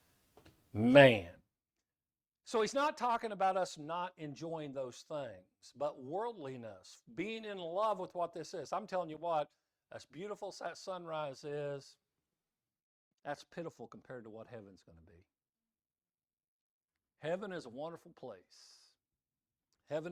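Zipper noise runs from 1.04 to 1.62 s in this speech clip. The level falls by roughly 20 dB in unsmoothed steps, about a hundred per second, each leaving a small click that buzzes over the voice.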